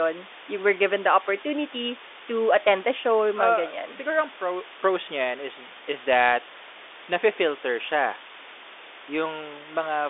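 From start to finish, the speech sits on a steady, even hiss. This is low bit depth with dither. The samples were rounded to very few levels, which fits about a 6-bit signal. Dither was added before the rounding, so the error turns into flat white noise instead of distortion. The hiss is high, around 15 dB below the speech, and it does not rise or fall with the talker. The telephone band, capped near 3.8 kHz and consistent with 40 kbit/s G.726 ADPCM, carries the hiss along with the speech.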